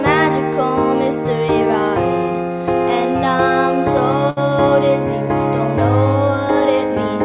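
At 4.30 s the sound briefly freezes into a held, fading sound that trails off until about 4.39 s, and when the audio returns it has skipped ahead. This is a burst of packet loss. Consecutive packets went missing, so the receiver stretched the last good audio for about 65 ms while lowering its level. About 60 ms of the original audio never arrives, all within band-limited call audio that stops at 4 kHz.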